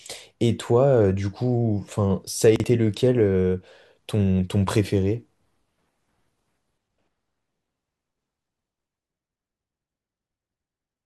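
At 2.56 s, running to 2.64 s, the speech shows chunks out of order: one 40 ms block arrived late and plays after the block that should have followed it, so two neighbouring slices trade places. The result is a brief jumbled stutter with three hard joins. Unlike a dropout or skipped chunk, nothing goes missing and no silence or jump forward appears; the material is all there, just briefly scrambled.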